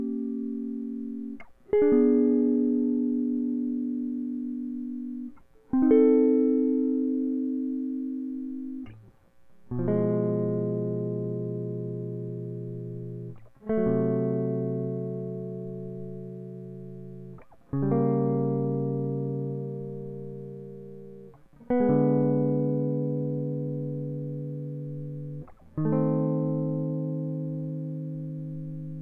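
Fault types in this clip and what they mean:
No faults detected in this music clip.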